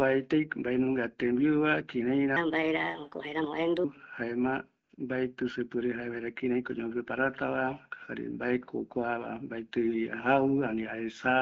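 From 2.36 to 3.84 s the speech suddenly runs fast, about 1.27 times normal speed, and the pitch jumps up by roughly four semitones. That's a section at the wrong speed: speed and pitch shift together and snap back at the end. The likely cause is that stretch being played or edited against the wrong clock, so the talker sounds hurried and higher for about a second and a half.

Just after that there's AMR comfort noise, first from 4.84 to 4.89 s, about 60 ms, then a short 20 ms blip at 4.96 s. Across those gaps the real background drops out and a smooth, even hiss takes its place, because the phone stopped sending speech frames and the receiver filled in with synthetic noise. The surrounding AMR-WB coding has only light damage, which fits the 12.65 kbit/s mode.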